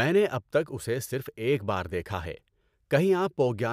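No technical faults are audible.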